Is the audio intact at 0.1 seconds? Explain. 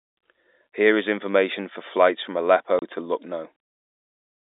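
Yes, at 0.1 s the speech is intact, with only the narrow telephone band of the G.711 line audible and no fault at that moment.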